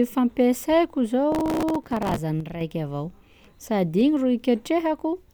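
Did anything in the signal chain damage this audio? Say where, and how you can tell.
Yes. From 1.32 to 2.18 s the speech carries a gritty crackle, the signature of processor overload crackle at the driver or buffer stage. Buffers of a few milliseconds missed their deadlines dozens of times in a row, each miss replaying a scrap of old audio with hard edges.

From 2.40 to 2.61 s the level falls abruptly by about 6 dB, then returns. That step matches one channel dropping out before the mono sum, halving the shared content. The likely cause is an intermittent connection in the analogue wiring or interface.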